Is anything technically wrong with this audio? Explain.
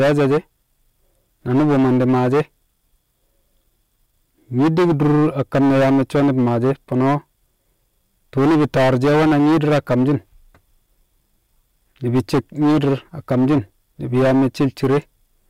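Yes. The speech suffers hard clipping at 0.00–0.38, 1.50–2.41, 4.58–7.15, 8.37–10.15, 12.07–12.94, 13.31–13.58 and 14.14–14.98 s, overdriven by about 8 to 15 dB, so waveform peaks are sliced flat. The resulting high harmonics give a harsh, crackling fuzz on loud syllables, abrupt and gritty rather than the rounded warmth of soft saturation.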